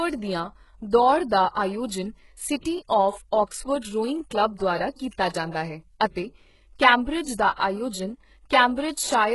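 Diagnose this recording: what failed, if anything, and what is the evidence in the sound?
The fault sits at the codec stage and runs through the whole recording: the upper register of the speech sounds synthetic, with s sounds gritty and lispy and the treble metallic, and nothing at all is present above 11.5 kHz. The likely cause is HE-AAC compression at a very low bitrate, around 12 kbps, where only the lower spectrum is coded and the treble is rebuilt by copying lower bands upward. On a spectrogram the upper bands show as blocky, repeated copies of the lower ones, and harmonics break at the crossover before a hard ceiling at 11.5 kHz.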